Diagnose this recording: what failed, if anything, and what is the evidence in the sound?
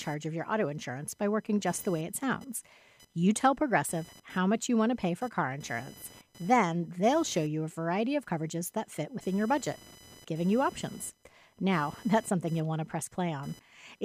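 Computer activity noise runs through the whole recording, a failure in the analogue wiring. A buzzing whine, pulsing at around 1 kHz, sits roughly 25 dB below the speech. It tracks the computer's load, not the talker. The computer's load changes are shifting the shared ground under the audio circuit.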